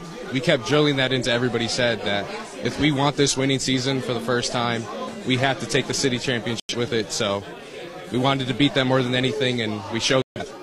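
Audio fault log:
1.07–1.11 s, corrupt frame decoded: A short chirp-like burst appears, peaking around -25 dBFS. Damaged bits in a couple of compressed frames were decoded anyway. Misread gains and codes put energy at wrong frequencies, so the burst lasts only as long as those frames.
6.60–6.75 s and 10.22–10.41 s, corrupt frame muted: The sound cuts abruptly to silence twice, for about 0.15 s and then about 0.19 s. The decoder rejected damaged frames and the player filled their place with silence. The lengths fit two and three frames. Timing is kept.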